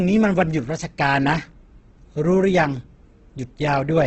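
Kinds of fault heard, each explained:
Opus compression: the speech sounds heavily grainy and rough, with nothing above 8.2 kHz, likely a starved Opus music-mode encoder filling bands with noise, fitting about 12 kbps.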